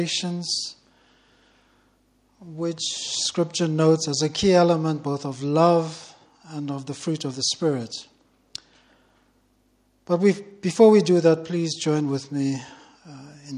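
No technical faults detected.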